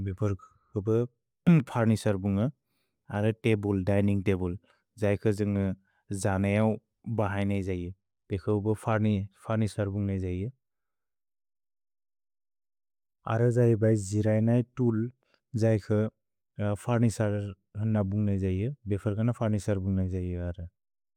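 No technical faults can be heard anywhere in the recording.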